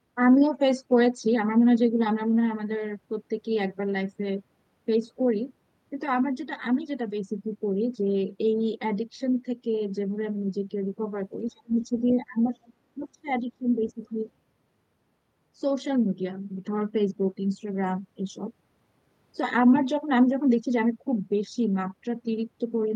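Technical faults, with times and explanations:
11.49–12.56 s and 12.96–14.26 s: speech suppressed in double talk. The talker's level dips, by about 25 dB at worst in the first stretch and about 20 dB in the second, with roughly 700 ms of each span affected. This is likely an echo canceller that could not tell the near talker from loudspeaker echo while both sides spoke, so it turned everything down.
11.57 s, 11.82–12.13 s and 12.57–12.73 s: the other side's voice leaking through. A second voice breaks through in short scraps, very faint at first, then at roughly 20 dB and later 30 dB below the speech. The likely cause is loudspeaker playback reaching the microphone that the echo canceller did not fully remove.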